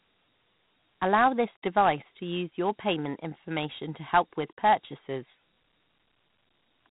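From start to finish, the speech has been passed through Dialogic VOX ADPCM, the 4-bit adaptive coding scheme used in phone menus and voicemail. Each sample is stored as a small step relative to a predicted value, and the coarse steps leave plainly audible damage: a rough, granular hiss that rides along with the speech. Nothing is heard above 3.8 kHz, and the overall character fits a rate of about 32 kbps.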